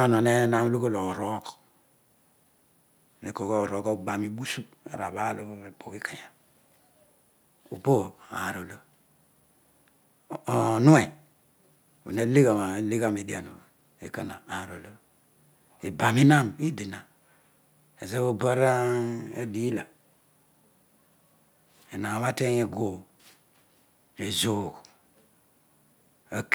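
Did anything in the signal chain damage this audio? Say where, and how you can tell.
No, nothing along the chain from capture to playback has damaged this speech recording. No stage leaves a mark that can be heard anywhere in the clip.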